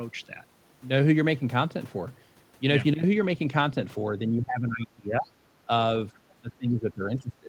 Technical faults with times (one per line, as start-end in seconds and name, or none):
4.29-5.29 speech suppressed in double talk
6.31-7.48 speech suppressed in double talk